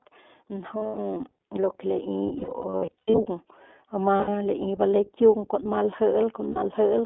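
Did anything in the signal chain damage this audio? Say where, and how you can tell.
Yes. At the codec stage, the whole clip has been through iLBC. Speech is confined to roughly 250 Hz to 3.5 kHz and sounds plainly rough and synthetic, which fits the 15.2 kbps, 20 ms-frame mode.

In call processing, automatic gain rising lifts the level by about 8 dB from 0.49 to 3.58 s. Speech and background swell together as the gain creeps up.

On the network, lost iLBC frames occur at 0.78–0.98 s, 2.38–3.20 s, 4.16–4.32 s and 6.50–6.58 s. The decoder fills these gaps, each run around 70 ms at most, with buzzy held vowels that recover almost instantly.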